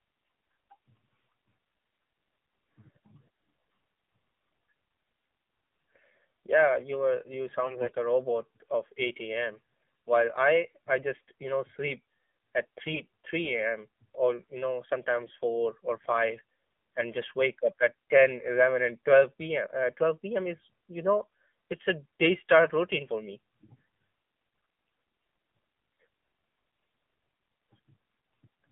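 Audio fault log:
Throughout: AMR narrowband mobile codec. The band is limited to 200 Hz to 3.5 kHz, and the buzzy, synthetic timbre fits a low-rate 7.4 kbps vocal-tract model.
7.64–7.95 s, 12.94–13.06 s, 15.22–15.34 s: AMR bit errors. Between "you were you" and "a robot of", after "you know sleep at", and after "or you know", the voice turns briefly hoarse and gargly at a roughly unchanged pitch. Corrupted excitation pulses and parameters are the cause, and the first and third bursts are heavier.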